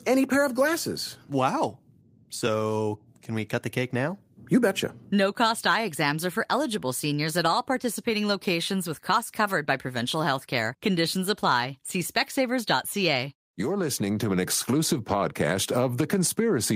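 No audible technical faults.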